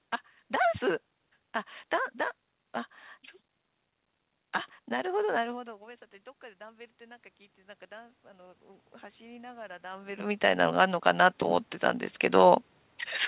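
From 4.9 s to 11.73 s there is automatic gain rising. After the input dropped by about 21 dB, the gain control gradually added about 12 dB, so speech and room noise swell together. On a waveform, envelope and noise floor climb steadily.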